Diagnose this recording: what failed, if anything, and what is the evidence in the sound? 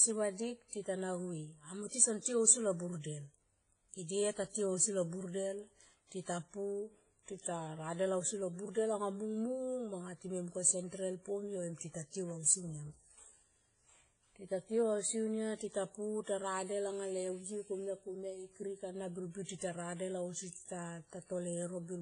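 The codec stage failed: the speech shows the signature of heavy WMA compression at a low bitrate, which fits roughly 24 kbps. It likely comes from encoding with long transform blocks, so quantisation noise smears across tens of milliseconds around each syllable and weak spectral lines are discarded. Throughout the clip there is nothing above 10.4 kHz, and the audio sounds ringing and washy, with a hiss that swells and fades with the signal.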